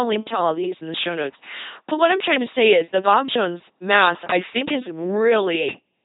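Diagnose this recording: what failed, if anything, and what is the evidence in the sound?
LPC-10 vocoder damage runs through the whole clip, at the codec stage. The speech has a buzzing, mechanical robot quality, and nothing survives above about 3.9 kHz. This points to a very low-rate parametric coder, consistent with 2.4 kbit/s. The codec discards the waveform and resynthesises it. A filter of up to ten poles is driven by either a pulse train or noise, so each frame becomes wholly voiced or wholly unvoiced.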